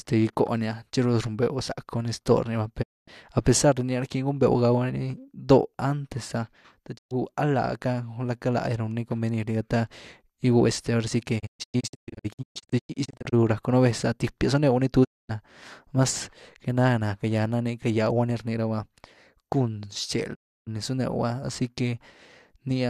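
The receiver repeatedly lost the digital signal or rejected corrupt frames and muted until clean frames returned, a digital broadcast dropout. Each time, the speech fades out over about 20 ms and goes silent: 2.81 to 3.09 s, 6.97 to 7.13 s, 15.03 to 15.31 s and 20.33 to 20.69 s. From 11.38 to 13.34 s it breaks into many short holes, none longer than 120 ms, that together remove about 1 s of speech. The missing audio never returns.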